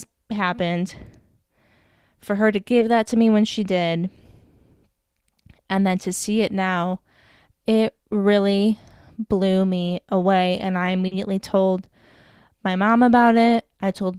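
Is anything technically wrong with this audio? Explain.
Yes, there is short concealed packet loss at 2.79 to 2.83 s and 11.07 to 11.13 s. About 20 ms and then 40 ms of speech arrived too late, so the decoder extended the preceding sound and blended back in. The result is a brief smear rather than the hard silence or click of a plain dropout.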